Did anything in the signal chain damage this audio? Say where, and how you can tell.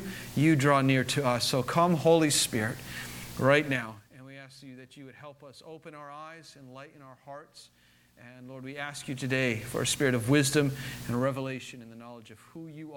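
Yes. Zipper noise appears between 3.67 and 4.13 s, at the driver or buffer stage where gain is applied. The level drops by around 25 dB there. It falls in audible stair steps of 2 dB each, at around twenty steps per second. Each jump leaves a small click, so a fast ticking rides on the sound during the fade. The gain is being updated once per block with no ramp between values.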